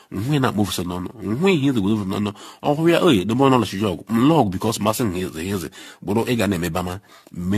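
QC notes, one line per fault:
Throughout, generation loss: the speech sounds swirly, hollow and smeared, with consonant attacks blurred, more damage than a single lossy pass at this quality would leave. The likely cause is the audio being decoded and re-encoded around ten times, each pass quantising on a shifted frame grid so noise and spectral holes pile up; the character points to AAC-LC at about 64 kbit/s. On a spectrogram, nothing above 14.2 kHz, patchy holes and smeared onsets; waveform transients look softened.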